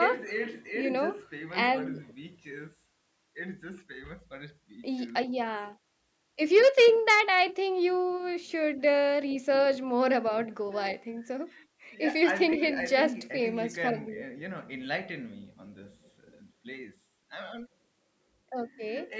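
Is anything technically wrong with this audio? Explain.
No, nothing technically wrong turns up in this speech recording. It has passed through a call's microphone processing, which trims the deepest bass and leaves nothing above 8 kHz, as that path normally does.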